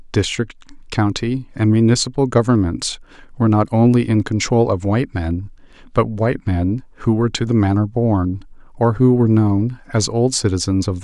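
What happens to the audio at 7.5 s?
Nothing goes wrong at 7.5 s; the speech there carries on cleanly, with no dropout, click or distortion to be heard.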